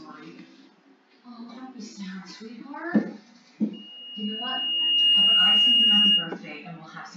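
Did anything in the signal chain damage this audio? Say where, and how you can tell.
Yes, loudspeaker feedback squeal in the acoustic loop: a 2.9 kHz tone swells over about a second and a half from 3.73 s, peaking about 15 dB above the sound, until 6.34 s.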